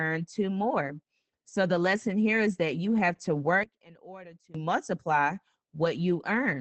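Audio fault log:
Throughout: Opus voice compression. Speech sounds muffled and slightly hoarse, with nothing above 8.5 kHz. Low-rate SILK coding, about 12 kbps, coarsens the voice.
3.64–4.55 s: one channel inverted. The voice nearly vanishes, dropping about 21 dB. Likely one channel's polarity flipped, cancelling the centred sound in mono.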